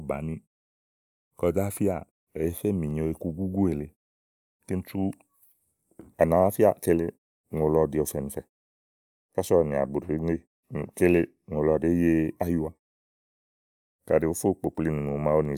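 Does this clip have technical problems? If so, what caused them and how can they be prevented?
No, nothing in this speech clip stood out as a technical problem on listening, so there is nothing here that needs preventing.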